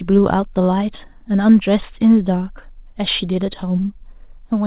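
Nothing goes wrong in this speech, which simply comes across as an ordinary phone-style call, with nothing above 4 kHz in a way that fits a narrowband G.711 mu-law codec.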